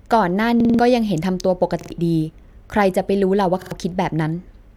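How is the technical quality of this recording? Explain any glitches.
The speech is marred by three stutters from repeated buffers. A repeated buffer fault hits at 0.60–0.79 s, 1.81–1.90 s and 3.62–3.72 s. New audio arrived late, so the last 46 ms chunk, which fits a 2048-sample buffer, replayed with hard joins, four extra times first, then twice, dropping about a fifth and a tenth of a second.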